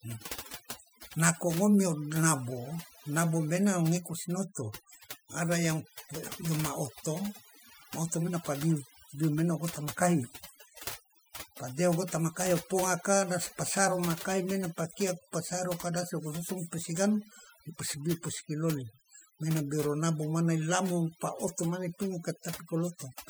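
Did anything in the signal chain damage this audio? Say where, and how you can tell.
Yes, at the call-processing stage: overdone noise removal runs through the whole speech clip. The suppressor judges each frequency band against its noise estimate and pulls down any band that comes close, so the background falls to near silence dotted with twinkling specks, and the softer parts of the voice are cut with it. A simple gate would mute everything at once. This works band by band, which is why the isolated tonal specks appear.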